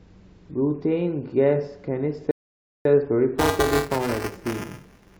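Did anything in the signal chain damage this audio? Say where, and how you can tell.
Yes. From 2.31 to 2.85 s the speech drops to silence, then picks up exactly where it left off, adding about 0.54 s. This is a rebuffering stall at the playback stage: the player exhausted its downloaded audio and paused until more data arrived.

From 3.38 to 5.17 s a robotic buzz at 375 Hz rides on the speech, present only while there is signal. This is buffer tearing at the driver or buffer stage. The buzz rate fits a 128-sample buffer. Writer and hardware reader cross inside each period, so roughly a tenth of every buffer replays audio about 5 ms old, with hard joins.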